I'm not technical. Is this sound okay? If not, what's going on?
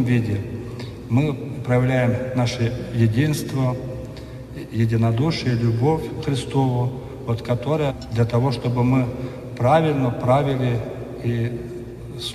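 No. At about 7.90 s the sound suddenly jumps forward, as if a piece had been cut out, with a tiny blip where the join is. This is most likely a stream segment skipped. Online audio arrives in short chunks one after another. When one chunk fails to arrive, the player doesn't wait for it. It goes straight on to the next chunk, so whatever was in the missing one is never heard.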